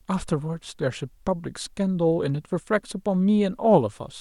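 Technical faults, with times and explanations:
No technical faults can be heard anywhere in the speech. There is nothing here that needs a time or an explanation.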